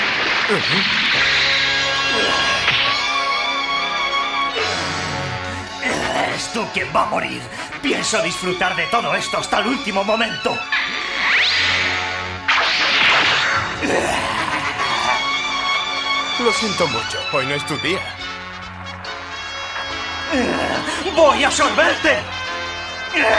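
Nothing technically wrong turns up anywhere in this audio, so there's no fault to point to here.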